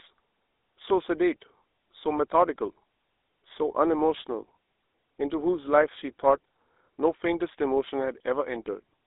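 Throughout, the speech sounds buzzy and gravelly, with nothing above about 3.7 kHz, the hallmark of the GSM full-rate codec, consistent with its 13 kbps pulse-driven vocal-tract coding.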